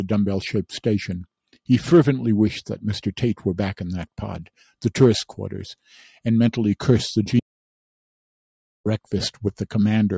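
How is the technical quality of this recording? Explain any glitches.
The main problem is a gap where the audio drops out entirely. The band tops out at 8 kHz, as call microphone processing leaves it.

An audio dropout to silence runs from 7.39 s to 8.86 s. That is about 1.46 s of lost sound. The input was likely cut off, by a broken link or a muted device, while recording continued as silence. The sound stops abruptly mid-flow. The gap is dead silent, with no room tone. Then the sound resumes just as suddenly.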